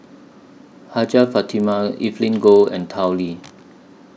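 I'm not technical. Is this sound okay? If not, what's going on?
No. Throughout the speech there is a steady buzz of tiny ticks, about 25 per second, heard only while someone is talking. This is a resampler restarted on every block: the audio was converted in separate 40 ms pieces, leaving a small glitch at each seam.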